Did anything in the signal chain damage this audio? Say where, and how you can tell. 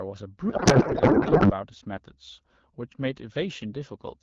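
Yes, at the codec stage. From 0.50 to 1.51 s the speech gives way to garbled noise and warble that barely tracks it. This is a codec payload misread: the AMR packing format was misread, which points to octet-aligned frames parsed as bandwidth-efficient. Unlike packet loss, nothing drops out.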